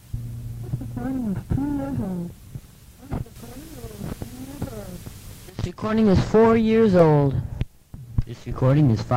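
From 0.13 s to 8.70 s, about seven clicks recur every 1.72 s, likely clock drift buffer slips. Their strict regularity distinguishes them from random dropouts.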